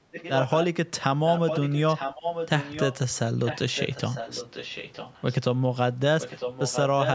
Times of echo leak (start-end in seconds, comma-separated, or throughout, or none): 0.12-0.66, 1.27-2.96, 3.45-5.38, 6.20-7.14